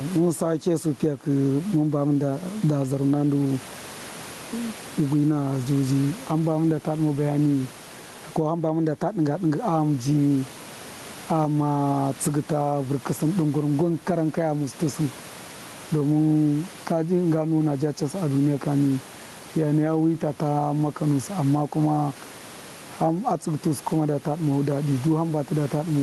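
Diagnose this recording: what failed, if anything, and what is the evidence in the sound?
Gain pumping runs through the whole clip. The room background sits about 28 dB under the speech, and the gain swings by around 15 dB. Loud and quiet syllables come out squashed toward one level. The likely cause is at the call-processing stage: input gain set far too hot, with a fast limiter or automatic gain control clamping down on each loud onset and releasing in the gaps.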